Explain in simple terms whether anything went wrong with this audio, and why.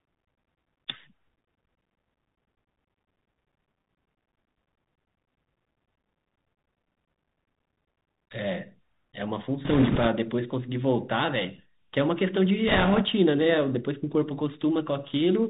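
The whole clip went through a Bluetooth CVSD headset codec, and you can plainly hear it. Everything above about 4 kHz is gone, so the speech sounds thin and phone-like. S sounds come out scratchy, and a grainy hiss sits underneath.

There are also two bursts of bit errors on the Bluetooth voice link, from 9.65 to 10.08 s and from 12.68 to 13.02 s. Flipped bits turn into a rushing, crackly noise rather than loud clicks. The first burst is rougher, with roughly 5% of bits wrong, against about 3% in the second.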